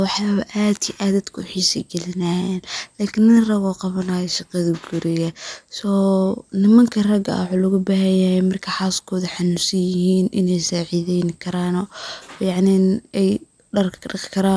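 Nothing in this speech recording stands out as a technical fault; it's an easy, uneventful listen with no glitches to point to.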